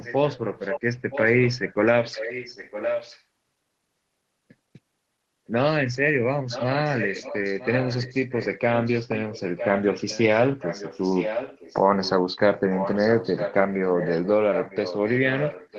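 Echo leak runs through most of this speech, at 0.01–0.8, 1.1–3.22, 6.49–8.6, 8.84–10.37, 10.58–11.8, 12.03–12.1, 12.74–14.28 and 14.53 s to the end. A copy of the far voice comes back just under a second late (about 958 ms), mostly around 10 dB below the speech. It's quieter at 12.03 and louder at 12.74–14.28. The likely cause is a loudspeaker whose echo canceller let some pickup through. The call path's upper limit sits around 12 kHz, which fits Opus.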